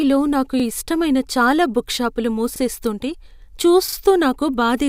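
Speech with three repeated-buffer stutters: at 0.60 to 0.64 s just before "ఇష్టమైన చాలా బుక్ షాపులు", at 2.56 to 2.60 s just after it, and at 3.88 to 3.97 s, where one piece plays three times. Each repeated piece lasts about 43 ms, which fits a 2048-sample buffer replayed when fresh audio arrived late. The joins are hard, and hardly any audio is lost.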